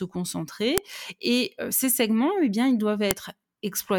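A speech clip with a file header played as audio: sharp, loud clicks at 0.78 s and at 3.11 s, the second just after "segments eh bien ils". Each marks a joined piece whose WAV header bytes were not stripped and so play back as samples.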